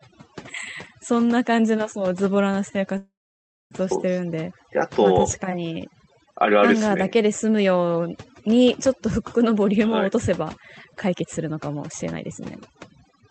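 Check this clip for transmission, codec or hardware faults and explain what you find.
There are three faults here: over-aggressive noise cleanup across the whole clip, one short stall in the call audio, and a hurried stretch near the end. Underneath, you can hear the call codec band-limited to about 8 kHz, which fits Opus at around 32 kbps.

The overdone noise removal runs the entire time. A noise reducer set far too hard is knocking individual frequency bands down or out whenever they sit close to what it thinks is noise, and the quieter parts of the speech get dragged out with them. The background drops and breaks up into little twinkling specks.

The call audio freeze runs from 2.97 to 3.73 s, about 0.74 s in all. It sounds like the receiver kept the last bit of sound going, letting it fade, and then about 0.59 s of that is plain silence before the speech picks up exactly where it stopped. 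Nothing is lost, but the gap pushes everything after it later by the same 0.74 s. The likely cause is delayed packets draining the jitter buffer, which then had to stretch the last sound until they arrived.

The jitter buffer speed-up covers 9.58 to 13.20 s. The buffer was holding more audio than it wanted, so it trimmed tiny pitch-period slices out over and over to catch up, around a third of a second in total. The speech plays about 9% fast with the pitch unchanged, so it just sounds a bit rushed.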